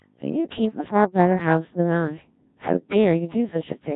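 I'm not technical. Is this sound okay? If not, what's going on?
No. All the way through, the speech sounds robotic and buzzy, like a talking machine. That is the Codec 2 vocoder, a digital radio system that sends only a rough outline of the voice (its pitch, loudness and tone) and rebuilds it from simple tones at the other end.

At 0.77 to 0.91 seconds and again at 2.60 to 2.73 seconds, the voice briefly jumps in pitch and tone and turns into warbling gibberish. These are bit errors on digital voice radio: a few scrambled bits of data, likely from a weak signal, knock each rebuilt chunk of voice off course.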